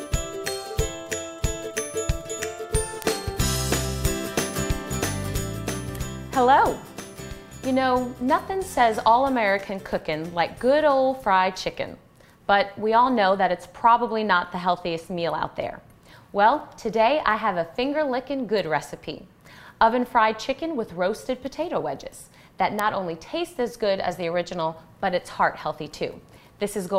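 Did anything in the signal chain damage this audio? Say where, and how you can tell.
Yes. Two isolated, razor-sharp ticks stand out, one at 3.02 s and one at 22.79 s, each peaking at about -3 dBFS and each lasting just a single sample. They are broadband and have nothing to do with the surrounding sound. That is the signature of a bit error spike: one flipped bit in memory or on a digital link throws a sample's value off by a power of two, and the very next sample snaps back.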